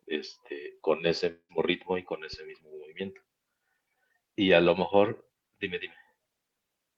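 At 1.31–1.51 s the speech smears into a fading buzz, then silence, likely a long network dropout. Unlike a brief glitch, 180 ms never returns.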